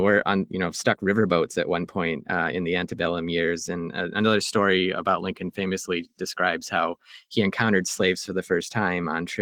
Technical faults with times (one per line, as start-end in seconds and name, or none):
none